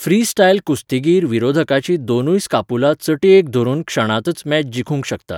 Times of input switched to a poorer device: none

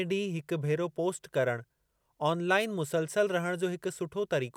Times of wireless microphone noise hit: 2.59-2.66

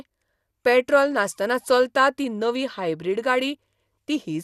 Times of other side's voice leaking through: none

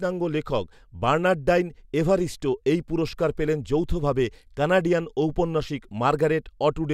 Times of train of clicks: none

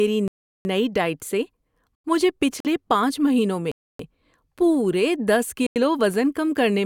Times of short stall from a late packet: none

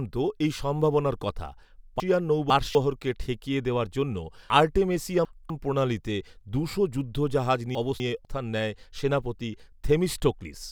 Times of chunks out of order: 2.00-2.75, 4.50-5.50, 7.75-8.25

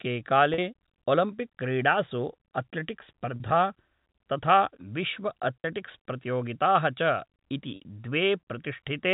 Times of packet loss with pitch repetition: 0.54-0.58, 3.36-3.40, 5.60-5.64, 7.76-7.80

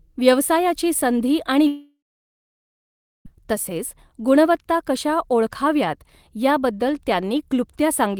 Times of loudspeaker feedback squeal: none

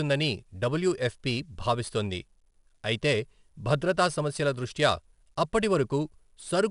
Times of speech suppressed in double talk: none

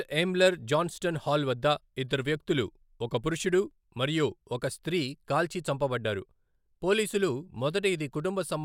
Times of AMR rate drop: none

